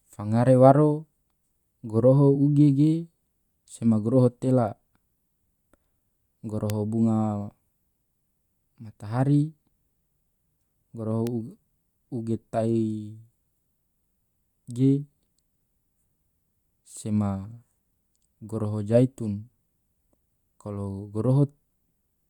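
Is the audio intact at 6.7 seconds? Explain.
No. At 6.70 s there is a bit error spike: a single bit flipped in two consecutive samples, so their values jump by a power of two and immediately return, reaching about -8 dBFS. It sounds like one sharp, broadband tick that has nothing to do with the speech around it. Unlike a dropout or buffer glitch, no audio goes missing and nothing repeats; the waveform is intact on either side of the two-sample jump.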